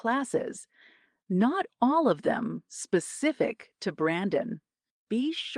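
A speech clip with nothing technically wrong with it.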